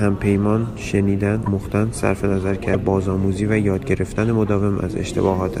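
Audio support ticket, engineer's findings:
Brief glitch, about 28 ms, at 1.45 s and 2.73 s; speech skips ahead. Likely broken MP3 bit reservoir: frames cut, next frame (about 24 ms) reads borrowed bytes from wrong frame. Unlike plain dropout, audio resumes further on.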